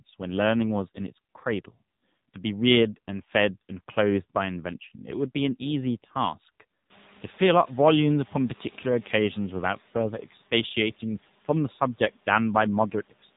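The whole clip runs through the AMR narrowband mobile codec, with nothing above 3.8 kHz and a buzzy, synthetic edge that fits a low rate around 7.4 kbps. The room noise jumps by about 25 dB around seven seconds in, and from there it picks up the codec's swirling warble.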